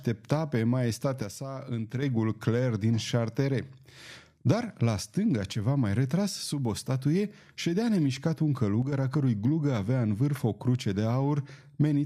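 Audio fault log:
1.22–2.02 s and 8.82–8.92 s, one channel drops out: the speech abruptly falls by about 6 dB, holding there for 0.8 s in the first case and roughly a tenth of a second in the second, then snaps back to full level. The likely cause is the loss of one stereo channel before the mono sum, so material shared by both sides loses half its contribution, while anything carried only by the missing side vanishes entirely for those spans.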